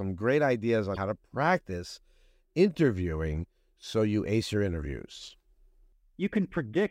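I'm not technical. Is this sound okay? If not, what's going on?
No, there's a brief glitch at about 0.93 to 0.97 s, right after "great ideas" and before "to practice interviewing so". That's damaged data in a compressed stream: a bit of the file got scrambled, so the player lost its place for a moment before catching up.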